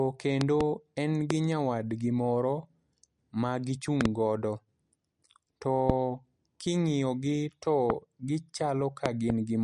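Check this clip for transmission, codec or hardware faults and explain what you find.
The clip has two faults: heavy MP3 compression across the whole recording, and a series of loud pops laid over the speech.

MP3 compression runs throughout and is plainly audible. Nothing is present above 11.2 kHz, which fits a low bitrate around 48 kbps. The likely cause is an encoder short of bits, dropping the treble and zeroing weak frequency lines that flicker on and off between frames. The result is a watery, swirly quality with smeared attacks. On a spectrogram there is a hard ceiling at 11.2 kHz and patchy, blocky gaps in the upper bands.

Loud pops occur at 0.41–0.63 s (two pops), 1.31–1.33 s just before "nyawadgi moro", 4.01–4.08 s (two pops), 5.90–5.92 s, 7.90–7.92 s just after "king'iyo gi to", and 9.06–9.32 s (two pops). Each peaks roughly 20 dB above the speech. The likely cause is a sudden voltage step or pulse from a connector, switch or driver glitch, with the speech continuing underneath. 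They show as tall spikes on the waveform and thin full-band vertical lines on a spectrogram.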